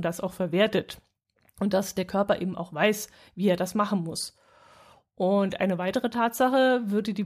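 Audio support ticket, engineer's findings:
No audible technical faults found in the speech signal; levels, timing and continuity hold steady throughout, and no component issue is indicated.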